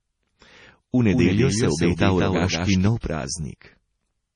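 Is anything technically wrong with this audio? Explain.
Yes, there are two faults.

Low-bitrate audio saved at a high bitrate runs throughout the speech: nothing is present above 10.5 kHz, and coarse, swirly MP3 artefacts remain. This likely comes from a roughly 32 kbit/s MP3 re-encoded at a much higher rate, which cannot restore the detail the first encoding discarded.

A doubled audio track runs from 1.12 to 2.88 s. A second full-band copy of the speech trails the original by about a fifth of a second, about 5 dB quieter, with no room colour, and starts and stops abruptly. The likely cause is the same audio being captured twice through a slower path.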